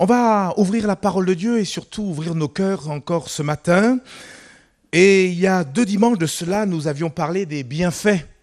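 All the way through, the sound is dull and gurgly, with a granular edge and the top end dropping in and out. That's likely MP2 compression at a rate around 80 kbps, where Layer II runs out of bits, shuts off upper sub-bands and quantises the rest coarsely.

From 4.47 to 4.59 s, and again from 6.28 to 6.55 s, you get DAB burbling, short blips of noise in single sub-bands. Bit errors slipped past error correction into the audio frames, so corrupted samples put noise into individual sub-bands.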